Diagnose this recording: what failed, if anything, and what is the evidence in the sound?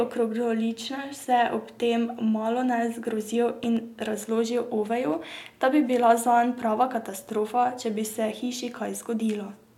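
At 3.64 s there's a loud pop in the speech, actually two pops in quick succession that are over by 3.79 s, peaking around 5 dB above the speech, with the talking carrying on underneath. That double hit points to something in the analogue wiring, likely a plug being seated or a switch bouncing, putting a sudden voltage step into the line, which the following circuitry shapes into a sharp thump before things settle.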